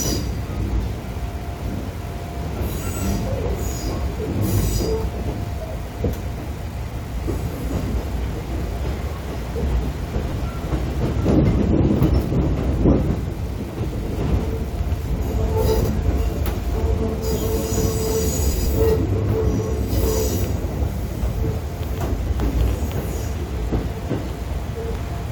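Unreliable data bit, throughout the clip: one data line in the path is marginal, so its bit comes out wrong in a random share of samples. Each error adds a spike of identical size, heard as a steady crackling fizz that continues through the pauses.

Frames out of order at 2.83, 10.32, 13.92, 15.80 and 18.53 s: two neighbouring runs of frames were decoded in swapped order. Each stretch plays its halves exchanged, in blocks of 64 ms or about 43 ms. The result is a brief garbled flutter, with no time lost.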